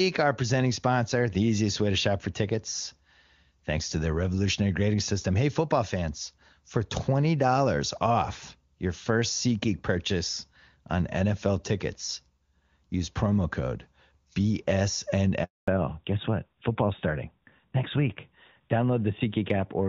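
At 15.44 s the call is handed from one network to another, and no speech frames arrive during the switch. This handover gap leaves a silence of 240 ms, until 15.68 s. The speech fades out within a few tens of milliseconds, and whatever was said in that span is lost.

From 15.68 s to the end, the call falls back from HD Voice to a narrowband codec, the step down from AMR-WB at a rate that fits 23.85 kbit/s to AMR-NB at about 12.2 kbit/s. With this fallback to narrowband, nothing above 4 kHz survives, so the speech turns duller and rougher than the clear wideband sound before the handover.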